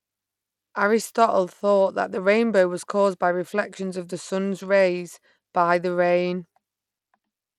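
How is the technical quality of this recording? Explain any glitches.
The recording is clearly degraded from start to finish by what is likely Bluetooth SBC compression. Throughout the speech, the treble flickers in and out and a gritty grain sits on the sound. The SBC codec splits audio into a few wide bands with crude bit allocation. At a starved setting, which fits roughly 96 kbps, the top bands lose their bits and the rest are coarsely quantised. Unlike a clean low-pass, the highs come and go unevenly, with a rough aliasing edge.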